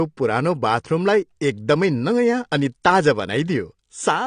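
From start to finish the speech sounds dull and smeared, with nothing above about 10 kHz and a fizzy, warbling texture clinging to sibilants and sustained sounds. The damage is plainly audible throughout. The likely cause is AAC compression, AAC-LC at a low bitrate that fits about 32 kbps. At that rate the encoder lowers its cut-off and starves the frequency bands it keeps, leaving gaps and noisy fill that smear fine detail.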